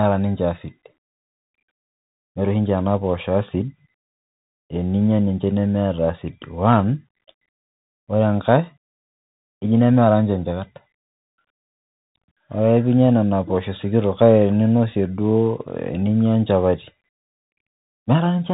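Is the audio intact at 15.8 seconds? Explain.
No. At 15.8 seconds, as across the whole clip, the speech has passed through a Bluetooth CVSD headset codec, which sends a single up-or-down bit per sample and adapts its step size to follow the waveform. The character fits the 64 kbps CVSD stream. Nothing above about 3.8 kHz survives, so the speech sounds muffled and narrow. Loud, fast-rising sounds outrun the step and distort, s sounds turn scratchy, and a granular hiss sits underneath.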